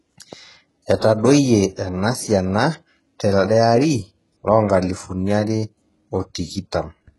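A speech recording that carries heavy HE-AAC compression damage from start to finish, likely from encoding at a very low bitrate, in keeping with roughly 12 kbps. The upper range is synthesized by spectral band replication, so s sounds come out gritty and metallic rather than crisp. On a spectrogram the treble shows smeared, repeated copies of lower bands, harmonics fail to line up across the crossover, and nothing appears above 11.5 kHz.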